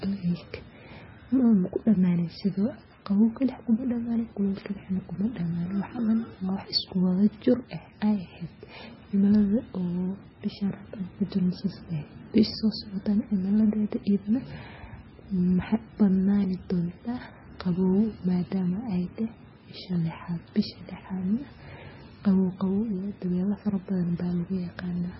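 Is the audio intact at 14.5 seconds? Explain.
No. At 14.5 s, as throughout, the speech carries likely heavy MP3 compression: nothing above 5.6 kHz, and weak frequency lines flickering frame to frame sound watery, fitting roughly 16 kbps.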